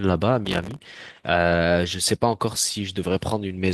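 A speech recording with a burst of processor overload crackle from 0.45 to 0.82 s. The processor falls behind and misses many buffer deadlines in a row. Each miss plays back a scrap of old audio with hard edges instead of fresh sound. The grit has a rapid, fine grain, which fits buffers of about 3 ms and roughly thirty misses. The tearing rides over the speech and stops once the load clears.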